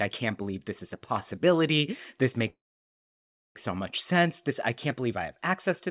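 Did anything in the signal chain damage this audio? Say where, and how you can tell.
Yes. At the network and jitter-buffer stage, a call audio freeze runs from 2.5 to 3.57 s: a short fading tail, then about 0.99 s of silence before "so much" resumes intact. Delayed packets likely drained the buffer, inserting a 1.05 s gap without losing audio.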